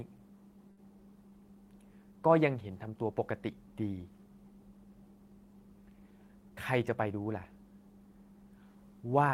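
At 0.71 s the speech stalls briefly, a short stall from a late packet. A packet came in late and the jitter buffer ran dry. The receiver held the last sound for about 61 ms until the packet arrived. Then it carried on from the same point. Nothing is lost, but the sound is drawn out until 0.80 s. The stretch carries a faint buzz or a slight dip in level.

From 6.50 s to 7.14 s there is a jitter buffer speed-up. The buffer held more audio than its target, as happens when delayed packets arrive at once. To trim the delay, the receiver cut out short slices of one or a few pitch periods, many in a row. The speech runs at about 109% speed with pitch unchanged. Roughly 70 ms is removed, and the passage sounds hurried.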